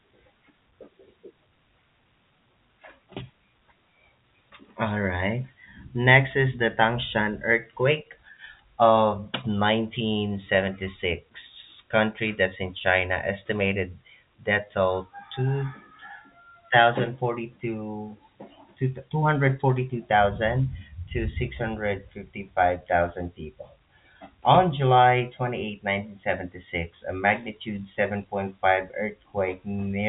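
No technical faults can be heard in this speech, which arrives over an ordinary telephone line with nothing above about 3.8 kHz.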